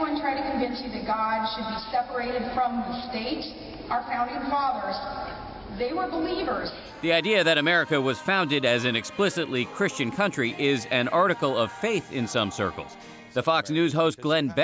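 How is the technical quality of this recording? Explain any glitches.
No glitches can be heard, and the technical quality of the recording holds up without any audible fault.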